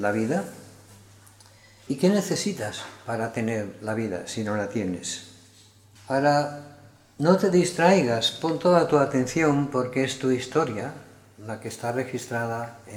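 From 11.56 s to the end, sample clock jitter sets in. The converter's timing wanders by a few microseconds, so each sample is taken a little early or late. Where the waveform changes fastest, that timing slip turns into amplitude error, heard as a gritty hiss riding on loud, bright passages, roughly 25 dB below the signal. On a spectrogram, a diffuse noise haze appears above strong high-frequency content. The waveform looks slightly fuzzed.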